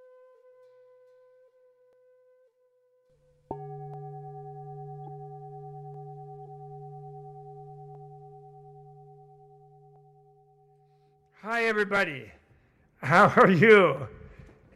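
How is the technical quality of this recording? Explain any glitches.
The recording has two kinds of glitch: a regular stutter running all the way through, and a couple of short digital blips in the middle.

Overlapping chunks show up at 1.93, 3.94, 5.94, 7.95, 9.96, 11.97 and 13.97 s, so one every 2 s. The audio was handled in 2-second blocks, and each block began about 7 ms before the previous one finished. That sliver plays twice at every seam, so you hear a small click or hiccup right on that steady two-second beat.

Corrupt frames were decoded twice, once from 5.06 to 5.09 s and once from 6.46 to 6.48 s. In each case a few compressed frames had damaged bits, and the decoder played them anyway instead of hiding them. The misread gains and codes put energy at the wrong frequencies for about 24 milliseconds each time, and you hear it as a brief chirpy, noisy blip that doesn't belong to the surrounding sound.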